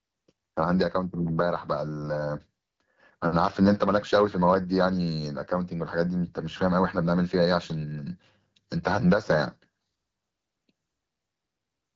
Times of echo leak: none

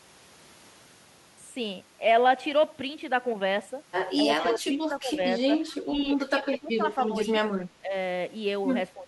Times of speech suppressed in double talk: 4.23-5.94, 6.26-7.94, 8.94-9.07

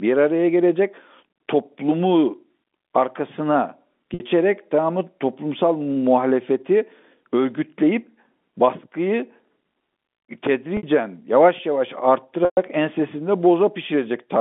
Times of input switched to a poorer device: none

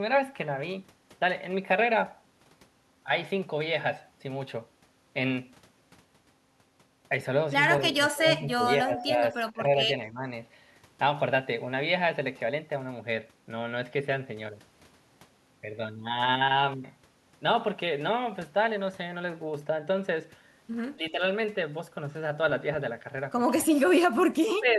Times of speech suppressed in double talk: 7.81-9.63, 10.10-10.27, 20.96-21.22, 23.63-23.92, 24.59-24.78

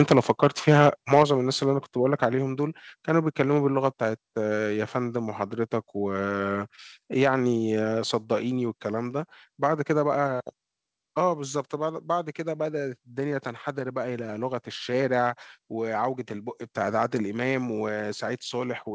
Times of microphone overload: 0.00-1.23

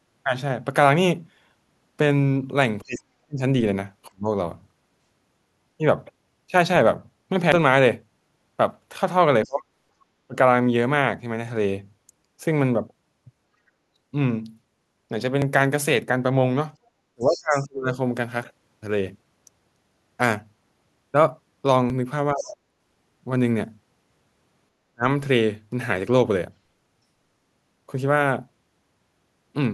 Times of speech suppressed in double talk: 2.82-4.28, 9.45-10.35, 13.61-13.79, 17.14-17.90, 22.33-25.07

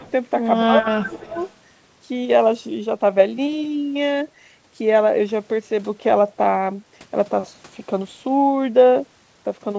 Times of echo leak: 0.03-0.11, 0.84-1.53

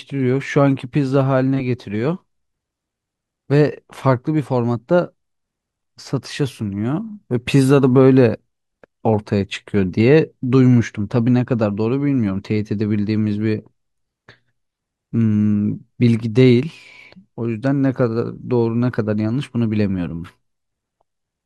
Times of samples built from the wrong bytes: none

